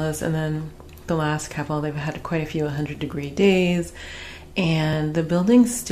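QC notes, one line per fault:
2.95 s and 4.93 s: overlap between stream segments. Consecutive segments, each 2.0 s long, carried timestamps that overlapped at their joins, and the player trimmed the supposedly duplicated span even though that sound was not actually repeated. About 6 ms and 5 ms of audio were discarded at the two boundaries, so the waveform leaps discontinuously from one point to a later one. Each join is heard as a brief click or tiny skip, recurring about 2 s apart at the segment boundaries.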